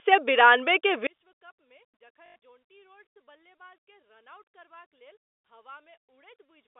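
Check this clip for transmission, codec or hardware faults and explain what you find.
Two faults turn up in the speech, both sitting on top of a telephone-band G.711 line.

From 1.07 s, right after "सए बिरानबे के", to the end, a mono fold-down drops about 36 dB and the voice nearly vanishes, likely from one channel inverted, so the matching halves cancel.

At 2.26 to 2.36 s there's packet loss with the last packet repeated: about 100 ms filled by looping, which fits 20 ms packets, giving a 50 Hz robotic stutter.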